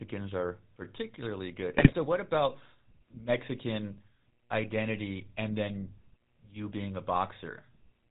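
Across the whole clip the speech carries the plainly audible coloration of the GSM full-rate codec, which fits the 13 kbps full-rate coder. The codec rebuilds the voice from a vocal-tract filter excited by a sparse, regularly spaced pulse train that keeps only a third of the excitation samples. That leaves a buzzy, gravelly roughness on every voiced stretch, and the band stops at 4 kHz, so sibilants and upper harmonics sound dull and truncated.

From 1.77 to 1.97 s, between "are particularly good" and "what about", GSM bit errors break up the speech. Flipped bits on the link corrupted the decoder's filter, pitch and gain parameters, so for a few frames the spectrum bends and the level jumps. The result is a short burst of squawks, pops and gargling that lasts about 0.2 s. This points to a run of roughly ten damaged 20 ms frames at a heavy error rate of around 5%.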